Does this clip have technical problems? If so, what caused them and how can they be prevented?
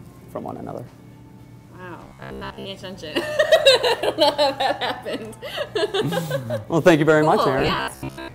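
Yes. From 2.05 to 2.67 s and 7.59 to 8.34 s there is robotic sound from repeated short buffers, likely caused by audio arriving too seldom, so a segment of about 15 ms repeats, imposing a 66.8 Hz buzz over most of the sound. Larger buffering or steadier data delivery prevents it.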